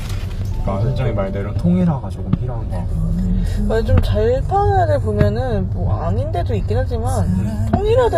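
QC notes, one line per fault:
Throughout: HE-AAC compression, likely. The treble is clearly damaged: it sounds bright but synthetic, with gritty, metallic texture and nothing above 14.9 kHz. Upper bands appear copied from lower ones and roughly reshaped, so harmonics misalign, which fits a low bitrate around 24 kbps.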